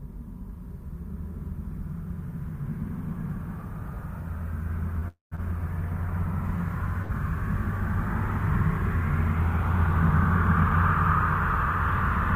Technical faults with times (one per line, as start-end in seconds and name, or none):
4.99-5.04 short stall from a late packet
5.08-5.33 call audio freeze
5.35-5.40 short stall from a late packet
7.02-7.11 short stall from a late packet